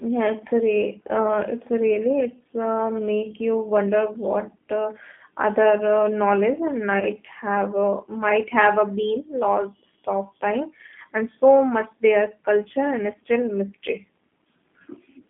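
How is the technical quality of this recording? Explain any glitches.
The recording has plainly audible codec damage throughout and two short glitches near 7 and 15 seconds.

G.729 codec damage runs through the whole speech clip. The codec rebuilds each 10 ms frame from a vocal tract filter, a pitch predictor and a few pulses, and the line passes only about 200 Hz to 3.4 kHz. The narrowband, slightly rough and synthetic sound fits a G.729A link at 8 kbit/s. Sibilants and breath lack their upper band, and voiced sounds have a rough, reconstructed edge.

VoIP packet loss concealed by the speech codec occurs from 7.00 to 7.04 s and again from 14.84 to 14.87 s. Each time, about 20 ms of audio went missing, which fits a single lost packet. The decoder filled the gap by repeating its last pitch and filter settings at falling gain. Because each frame builds on the one before, the disturbance outlasts the 20 ms gap. 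Each glitch is a brief stretched smear that dips in level before the sound recovers.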